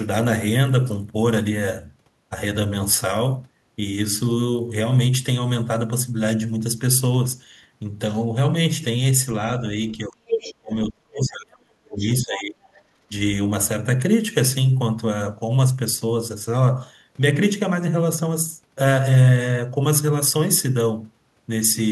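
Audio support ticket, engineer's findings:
Speech suppressed in double talk, 9.92–10.19 s and 10.61–12.61 s: talker dips about 20 dB, then about 35 dB; likely echo canceller ducking both talkers while the other end speaks.

Other side's voice leaking through, 10.27–10.55 s (about as loud as the speech), 11.93–12.15 s (about 20 dB below), 12.63–12.82 s (about 35 dB below): likely residual loudspeaker echo the canceller failed to remove.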